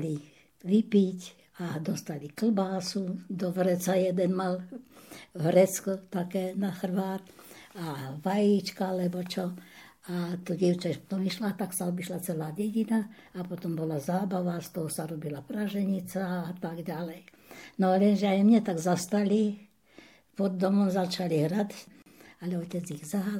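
A gap at a join of encoded pieces appears from 22.02 to 22.06 s: separately encoded segments were butted together untrimmed, leaving encoder start-up delay and final-frame padding in place. The result is a 39 ms silence with smeared edges, after which the sound resumes where it stopped.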